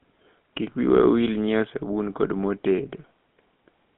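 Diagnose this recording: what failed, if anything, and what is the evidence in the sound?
Codec stage: a GSM full-rate codec rebuilds the speech from a vocal-tract model driven by sparse pulses, leaving a buzzy, gravelly roughness throughout, confined to 150 Hz–3.5 kHz.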